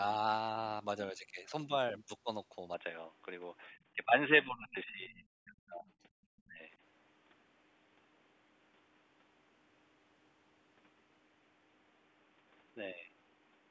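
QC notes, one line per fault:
2.74 s to the end: input switched to a poorer device. From 2.74 s the sound goes dull and boxy with no gap at the changeover. The level shifts by a few dB and a new, faint noise floor comes in well under the talker. The likely cause is the input hopping to a narrower-band mic or a headset's call profile. The normal low-cut from call mic processing is there throughout.
3.95–4.11 s, 4.46–5.26 s, 5.45–5.86 s, 6.48–6.61 s: speech suppressed in double talk. The talker's level ducks in these spots, lightly in the first (around 10 dB) and much harder in the others (roughly 20 to 25 dB), chopping into the longer 4.46–5.26 s stretch for most of its length. The likely cause is the far side talking at the same moment, with the echo canceller unable to separate the two and pulling everything down.
4.96–5.13 s: other side's voice leaking through. A short, faint scrap of a second voice sits well below the talker, inside one of the suppressed stretches. 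The likely cause is far-end audio from the loudspeaker getting back into the mic, with the echo canceller leaving a residue instead of clearing it fully.
6.14–6.20 s: background gated by the echo canceller. The room tone abruptly drops out, down about 40 dB, for roughly 70 ms, then snaps back. This is the canceller clamping the mic hard while it thinks the loudspeaker is active, then releasing.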